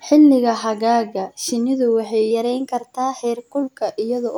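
Right after "xagaaga shinnidu waxay", from 2.31 to 3.62 s, the speech runs about 5.6% fast and roughly 94 cents sharp, then snaps back. That's likely a drift correction step, where clock-matching software jumped the playback rate to rebalance its buffer.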